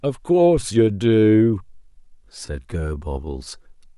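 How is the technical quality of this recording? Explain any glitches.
The recording has one clear fault: a time-stretched section from 0.8 s to the end. Software likely stretched this stretch to fill a longer slot, slowing it to about 0.73 of normal pace while holding pitch by repeating short pieces. The speech abruptly drags.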